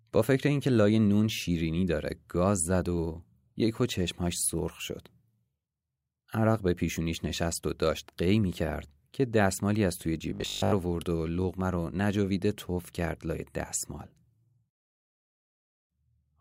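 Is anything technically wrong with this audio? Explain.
Yes. Robotic sound from repeated short buffers at 10.30 to 10.72 s: speech likely arrived too seldom, so a 20 ms chunk looped, forcing a rigid, metallic 50 Hz buzz.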